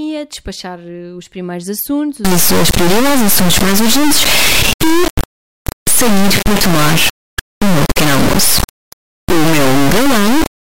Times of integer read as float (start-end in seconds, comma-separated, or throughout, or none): 2.25-10.72